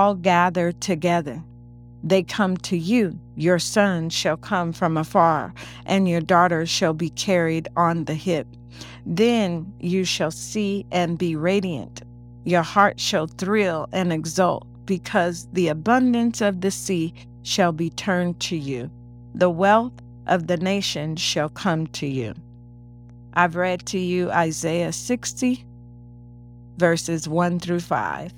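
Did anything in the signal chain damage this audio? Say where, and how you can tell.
Yes. Mains hum enters in the analogue wiring, before conversion. A steady 60 Hz tone with its low harmonics sits under the speech for the whole clip, roughly 20 dB below the signal, never changing in pitch or level. That points to a ground loop or a nearby transformer coupling the power line into the cable. Its fixed pitch and presence in pauses separate it from handling rumble or wind noise, which wander and follow movement.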